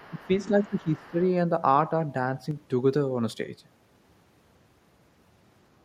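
From 0.0 to 0.39 s there is other side's voice leaking through. The echo canceller likely failed to remove the far end's loudspeaker sound from the microphone, so a second voice sits faint under the speech, about 30 dB below it. The same residue returns from 0.66 to 0.88 s and briefly from 1.05 to 1.11 s, each time as a quiet intrusion behind the main talker.

Overlapping that first stretch is speech suppressed in double talk, from 0.1 to 0.3 s and again from 0.48 to 1.19 s. With both sides talking at once, the canceller likely could not tell the local voice from the echo and attenuated everything together. The talker's level sags by around 10 dB at its deepest, and over these spans the speech sounds ducked.

From 2.51 to 2.56 s, one channel drops out. A stereo channel was likely lost for that brief moment, so after mixing to mono the material common to both channels falls abruptly by 6 dB. 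The result is a short, sudden dip in loudness lasting about 50 ms before the level snaps back.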